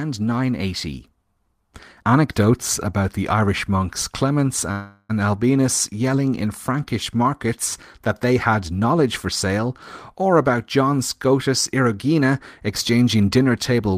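From 4.71 to 5.11 s the speech freezes into a fading buzz, then resumes where it stopped; a call audio freeze, likely from packets delayed about 380 ms.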